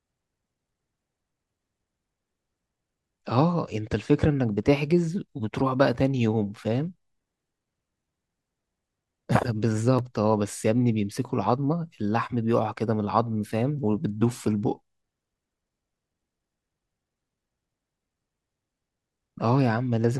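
At 9.99 s there's a block of digital silence in the speech, but it's tiny, only about 0.9 ms of silence. The output buffer probably didn't get filled in time, so the signal drops straight to nothing and snaps back with no fade. With a hole that short you don't hear a gap at all, just a tick or dip where the waveform cuts out and back.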